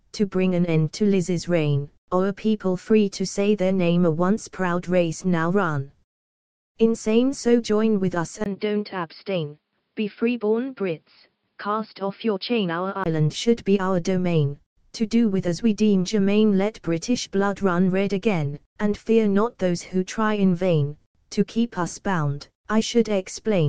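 From 8.44 to 13.06 s the sound turns duller and a few dB quieter, with nothing above 5.2 kHz and a brief gap at the switch, likely from an input switched to a poorer device.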